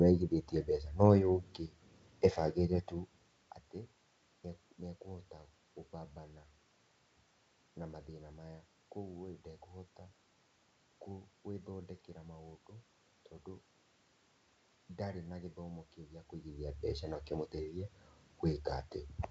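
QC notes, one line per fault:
No faults are present in the audio. Background room noise sits under the speech, the level shifts around 3 s and again near 16 s as the talker moves relative to the microphone, and the sound carries the roughly 7 kHz top end of G.722 wideband telephone coding.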